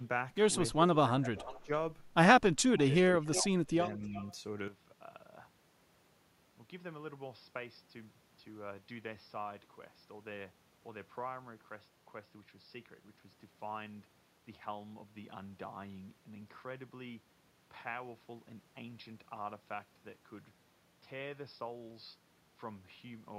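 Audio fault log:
0.73–0.96 s: speech suppressed in double talk. The speech dips slightly, by about 5 dB, likely because an echo canceller ducked it while both sides talked.
1.18–1.39 s: speech suppressed in double talk. The speech drops by about 15 dB, likely a canceller treating overlapping talk as echo.
1.39–1.66 s: echo leak. A faint copy of the speech returns 340 ms late, about 20 dB down, likely residual loudspeaker pickup.
1.62–1.71 s: speech suppressed in double talk. A brief cut of about 15 dB, likely from suppression during overlapping talk.
2.78–2.99 s: echo leak. A very faint repeat arrives 340 ms behind, about 30 dB below the speech, likely uncancelled loudspeaker sound.
3.33–3.39 s: echo leak. A short, stronger scrap of echo, about 15 dB down at 340 ms delay, likely leaking past the canceller.
3.37–3.70 s: speech suppressed in double talk. The speech sinks by about 15 dB for about 0.2 s in total, likely ducked as echo.
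3.82–4.32 s: echo leak. A half-second trail of delayed speech, 340 ms late and about 20 dB down, likely from incomplete cancellation.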